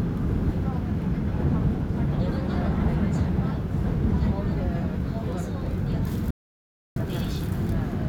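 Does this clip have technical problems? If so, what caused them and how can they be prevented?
Yes. There is an audio dropout to silence from 6.31 s to 6.96 s. The sound cuts off abruptly and returns just as abruptly about 0.66 s later. The gap is dead silence, with no background or room tone underneath. The input was likely lost briefly, perhaps through a loose connection, a failing link or an accidental mute, while the recorder kept writing silence. Whatever happened in that stretch is gone. To prevent it, secure cables and links and monitor the input live while recording.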